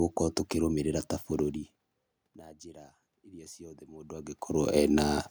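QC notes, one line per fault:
2.64 to 4.47 s, automatic gain rising: after the input dropped by about 24 dB, the gain control slowly lifted its gain by about 7 dB over nearly two seconds. Voice and room noise swell together at the same rate, which separates it from the talker moving, as happens around 4 s. There only the voice shifts level while the background stays steady.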